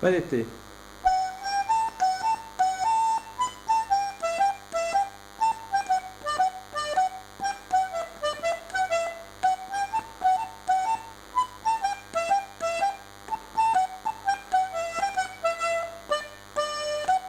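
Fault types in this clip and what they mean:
DECT cordless phone buzz: a nearby DECT handset or base transmits a radio burst every 10 ms, which the audio circuitry rectifies into a thin 100 Hz buzz running the whole clip at about 20 dB below the sound. A spectrogram shows evenly spaced horizontal lines at 100 Hz and its harmonics, and the waveform shows regular spikes 10 ms apart.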